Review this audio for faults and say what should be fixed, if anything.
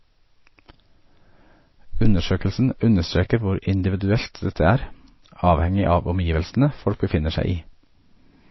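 The speech has MP3 compression damage from start to finish, and it is plainly audible. Nothing is present above 5.8 kHz. The encoder has cut the treble at a fixed point, so s sounds lose their edge. The audio sounds watery and swirly. This is likely a starved encoder dropping weak frequency lines, which flicker on and off between frames. The damage fits a low bitrate of about 24 kbps. To prevent it, encode from the original at a much higher bitrate or use a lossless format.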